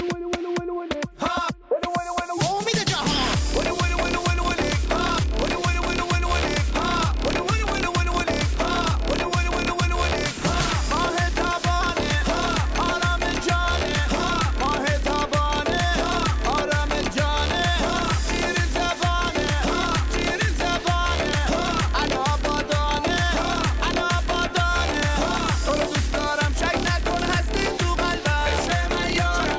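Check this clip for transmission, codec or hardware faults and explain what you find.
One fault appears near the end. From 28.2 s to the end at about 29.6 s, the resampler restarted on every block. Each 20 ms block was converted on its own, likely from 44.1 kHz down to 16 kHz. The converter's filter lacked neighbouring samples at each edge, leaving a small error at every boundary. These errors form a 50 Hz buzz that rides on the sound. The waveform shows tiny steps every 20 ms, and the spectrogram shows faint vertical lines spaced 20 ms apart.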